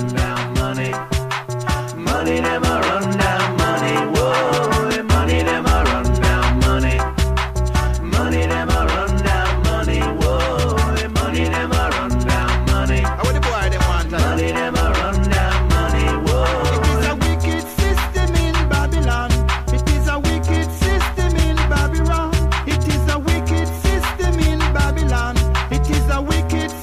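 No technical faults can be heard anywhere in the audio. There is nothing at any point in it that calls for a timestamp or a closer listen.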